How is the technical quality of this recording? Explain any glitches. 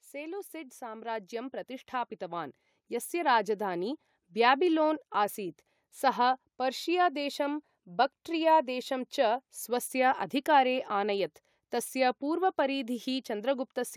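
The recording has one technical fault, at the start.

Automatic gain rising, from 0.1 s to 4.0 s: the automatic gain control judged the input too quiet and raised its gain step by step, by about 12 dB overall. The speech and the background noise swell together across those four seconds before the level settles.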